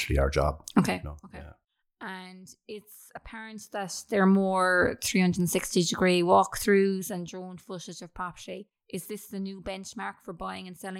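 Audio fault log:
0.79–1.16 s, 3.43–4.23 s, 6.93–7.33 s: zipper noise. After "our job" the level drops by roughly 20 dB, later rises about 20 dB, then falls about 15 dB before "footage of property". Each change moves in unsmoothed steps, roughly 150 a second, and every step clicks into a zipping buzz.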